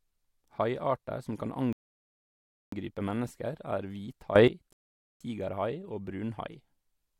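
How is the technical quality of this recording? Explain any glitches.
The recording has three glitches: two rebuffering stalls and one sudden gain jump.

At 1.73 s and again at 4.73 s, the speech drops to silence for about 1.0 s and 0.48 s. Then it resumes exactly where it stopped. These are rebuffering stalls: the player ran out of audio and waited. Nothing is lost, but time is added.

At 4.36 s, the speech and the background noise jump up together by about 14 dB, until 4.48 s. This sudden gain jump was likely caused by a gain change applied with no ramp.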